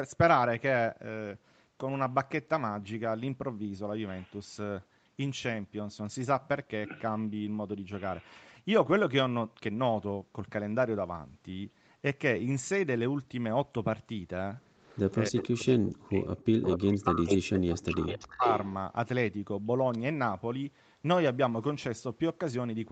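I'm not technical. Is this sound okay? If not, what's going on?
No. There are two problems, both in the stretch from about 14.8 to 18.7 seconds.

The first is an echo leak. From 14.82 to 15.12 s, at 15.70 to 15.76 s, 16.67 to 16.97 s, 17.26 to 17.38 s and 17.89 to 18.69 s you hear a late copy of the talking. It arrives about a quarter of a second behind the original at first, then nearly half a second behind. It starts faint, but from 16.7 s it is almost as loud as the real thing. The likely cause is that someone on the call is using a loudspeaker, and their microphone caught the sound coming out of it and sent it back.

The second is speech suppressed in double talk. From 15.29 to 18.46 s, roughly three seconds in total, the talker's voice keeps dropping away. At its worst it almost vanishes. This happens while both sides are talking at once. The likely cause is that the call's echo removal heard two sounds at once and could not tell the real talker from the echo. 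So it turned everything down, including the person you actually want to hear.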